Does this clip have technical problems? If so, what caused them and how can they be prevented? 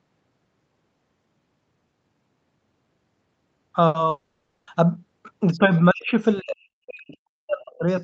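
Yes. From 4.09 to 4.69 s the last sound is stretched into a fading buzz before the speech resumes with a chunk missing, likely a long network dropout. A more stable network connection and redundancy or retransmission in the call path reduce such losses.

Between 5.52 and 5.59 s a faint second voice, roughly 25 dB below the talker, slips through, likely the other side's voice leaking through an incompletely converged echo canceller. Using a headset, or a better-tuned echo canceller with lower loudspeaker volume, prevents this.

The talker's speech then dips slightly, by a few dB, from 5.58 to 5.73 s. It is cut almost entirely, by around 40 dB, from 5.92 to 6.16 s and from 6.40 to 7.87 s. This is likely speech suppressed in double talk, with the echo canceller attenuating everything while both sides speak. A headset or an echo canceller with stronger double-talk detection avoids this suppression.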